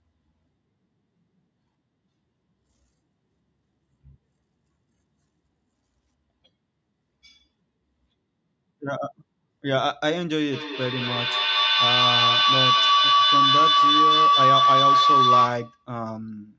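From 10.52 s to 15.9 s a piercing tone near 1 kHz swells over the speech, pulsing about five times a second and peaking about 8 dB above it. This is feedback howl: two devices in one room share the call, and each microphone-to-loudspeaker trip adds gain.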